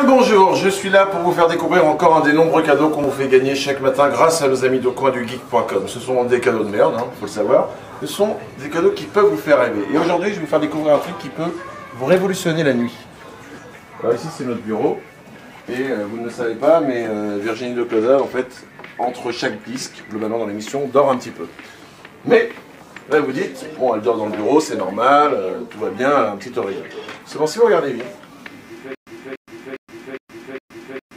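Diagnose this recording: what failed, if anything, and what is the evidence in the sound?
Stutter with silent gaps from 28.95 s to the end: a 288 ms burst repeats five times, each followed by 120 ms of dead silence, likely a stalled playback buffer replaying.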